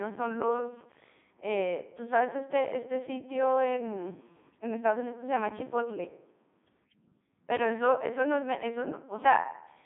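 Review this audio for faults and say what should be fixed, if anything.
Codec 2 vocoder damage runs through the whole clip. The speech is resynthesised from sine waves driven only by pitch, voicing and envelope, so it sounds robotic and buzzy, band-limited to 150 Hz–3.7 kHz with nothing above 3.8 kHz, which fits its 3.2 kbit/s mode. To prevent it, capture or transmit the speech through a waveform codec at a higher bitrate instead of a low-rate vocoder.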